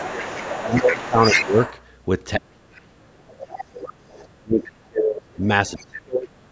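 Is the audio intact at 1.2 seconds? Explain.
No. At 1.2 s the clip sits inside two overlapping faults. The first is speech suppressed in double talk, from 0.0 to 1.58 s. Both ends of the call were most likely talking at once, and the echo canceller couldn't tell the local talker apart from loudspeaker echo, so it turned everything down. The talker's speech dips by up to roughly 15 dB and thins out in pieces, for about a second in total across that span.

The second is the other side's voice leaking through, from 0.0 to 1.82 s. The far end was likely played over the device's loudspeaker and not fully cancelled at the microphone, so a second voice sits underneath the talker, about 10 dB lower. The call's microphone processing is also present, with nothing above 8 kHz, which is expected for this kind of path.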